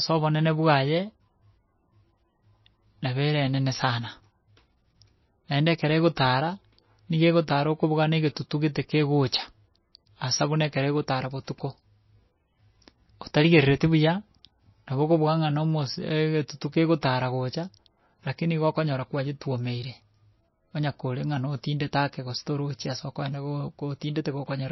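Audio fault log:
Throughout, MP3 compression (likely): the speech has nothing above 5.8 kHz and carries a plainly audible watery, swirling quality, which fits a very low bitrate of roughly 25 kbps. Short of bits, the encoder drops the treble at a fixed point and zeroes weak frequency lines, which flicker on and off between frames. That flicker, with chirpy s sounds and smeared onsets, separates it from a simple low-pass filter, which would dull the sound without the swirl.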